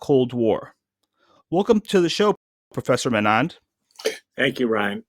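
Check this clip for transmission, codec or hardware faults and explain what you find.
One fault is present, a rebuffering stall. From 2.35 s to 2.72 s the speech cuts to silence for about 0.36 s. The player had used up its downloaded audio and paused until more data arrived. When playback resumes, it picks up exactly where it stopped. No speech is skipped or repeated. The gap simply adds time to the clip. It sounds like an abrupt hold mid-flow followed by a clean restart.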